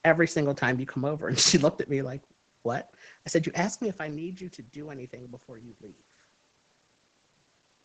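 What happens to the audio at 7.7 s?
Nothing goes wrong at 7.7 s: the audio there is intact and carries no technical fault.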